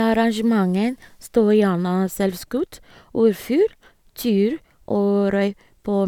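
No technical faults can be heard anywhere in the recording: the speech signal holds steady without interruption, distortion or level problems.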